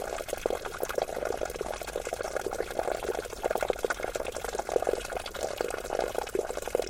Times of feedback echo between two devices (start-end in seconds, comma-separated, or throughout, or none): none